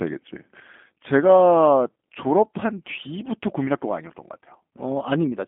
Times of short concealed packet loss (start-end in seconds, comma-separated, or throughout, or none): none